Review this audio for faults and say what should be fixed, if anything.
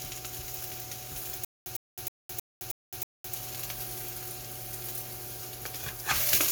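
From 1.45 s to 3.35 s there is a stutter with silent gaps: a 104 ms burst of sound repeats six times, each followed by 212 ms of digital silence, giving an even 317 ms cycle. This is likely a stalled player or stream replaying its last fragment on each retry, with the intervening audio lost. Prevent it by buffering enough data ahead of playback and muting, rather than replaying, the last fragment during a stall.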